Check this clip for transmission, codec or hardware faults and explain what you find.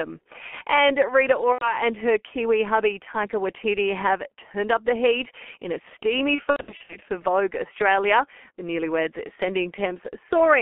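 Two faults are present: a heavy low-bitrate codec throughout the speech, and two packet-loss gaps.

G.723.1 codec, whole clip: roughly 6.3 kbit/s coding in 30 ms frames, band-limited to 250 Hz to 3.4 kHz, leaves speech muffled and hoarse, with smeared consonants.

VoIP packet loss concealed by the speech codec, 1.52 to 1.77 s and 6.35 to 6.96 s (after "heat in a steamy"): the decoder extrapolates its last pitch and filter, producing a buzzy tone or coloured noise that fades. The first gap covers about 90 ms. The second scatters about 300 ms of loss over 540 ms, with runs up to 90 ms, consistent with lost 30 ms frames. The voice stays weak or distorted past each gap.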